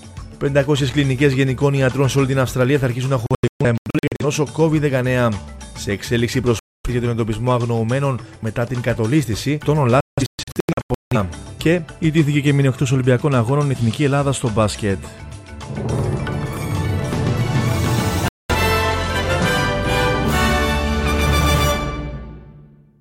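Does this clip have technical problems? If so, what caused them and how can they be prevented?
Yes. Digital broadcast dropouts mute the sound at 3.26–4.25 s and 10.01–11.17 s (clusters of short holes, longest about 0.13 and 0.17 s), and at 6.59–6.90 s and 18.28–18.55 s, as failed frames were discarded. Waveform and spectrogram show abrupt blank gaps. A stronger, steadier signal through better antenna placement or a wired feed prevents this.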